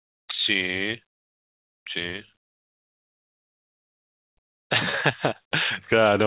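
From 2.1 to 2.91 s the speech catches and hitches seven times, each hiccup holding the sound in place briefly, the longest for about 70 ms. This is a repeated stall, or stutter: packets came in late, so the jitter buffer kept running dry, and the receiver stretched the last sound to cover each wait. About 171 ms is filled this way, roughly a fifth of that stretch, with nothing actually lost.

Between 4.41 and 5.29 s the speech drags, running at about 88% speed while the pitch stays put, so sounds come out drawn-out. This is a jitter buffer slow-down: with its reserve low, the buffer repeated individual pitch periods and slivers of pauses to rebuild its cushion, adding about 109 ms. Throughout, the audio has nothing above 4 kHz, which fits a narrowband call codec such as G.711.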